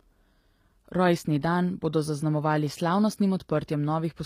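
From start to finish the speech carries plainly audible codec damage, likely from HE-AAC compression at a low bitrate in the region of 24 kbps. Only the lower spectrum is coded; the treble is rebuilt by copying lower bands upward, so s sounds turn gritty and lispy with a metallic sheen. On a spectrogram the upper band looks smeared and repeated from below, its harmonics misaligned across the crossover, and nothing appears above 15.5 kHz.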